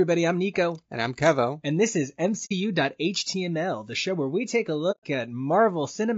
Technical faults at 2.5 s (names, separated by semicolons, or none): low-delay AAC compression; AAC frame loss with muting